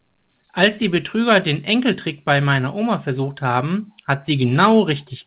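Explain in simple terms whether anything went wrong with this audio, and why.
Nothing went wrong; this speech recording has no faults.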